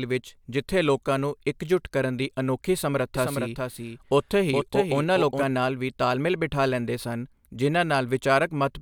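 From 3.15 s to 5.43 s, the speech is heard twice. This is a doubled audio track. A second copy trails the first by roughly 0.4 s and sits about 5 dB quieter. It carries the full band, with no decay or room colour. It starts and stops abruptly at those two times. The likely cause is the same audio reaching the mix through a second, slower path, or an edit holding two offset copies.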